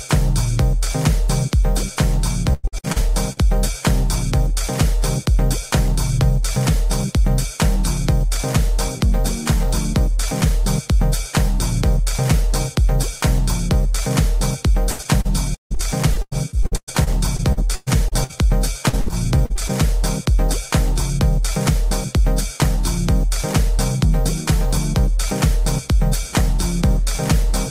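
Around 2.53 to 3.39 s there's a burst of repeated packet loss, the robotic-sound kind: chunks keep dropping out and the decoder papers over each one by stretching the last bit of audio, so about a third of that stretch is filler, with holes up to about 101 ms. It comes back worse from 14.91 to 18.37 s (gaps up to 158 ms), then briefly again at 18.89 to 19.71 s, choppy each time.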